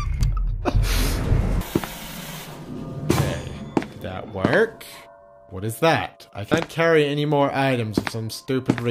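At 0.47 s, 4.0 s and 6.5 s, damaged data in the compressed stream makes the decoder misread frames and lose sync, giving brief blips seen as thin broadband vertical streaks.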